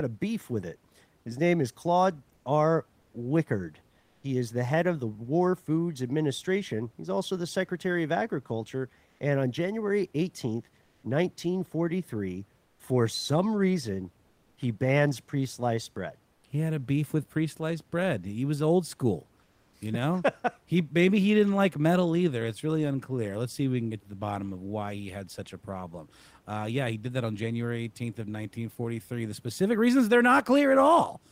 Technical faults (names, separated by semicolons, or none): comfort noise in place of the background